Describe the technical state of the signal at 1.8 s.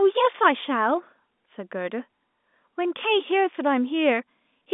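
At 1.8 s the speech comes through intact, carried on an ordinary G.711 telephone line with its usual band of roughly 200 Hz to 3.6 kHz, and no fault can be heard at that moment.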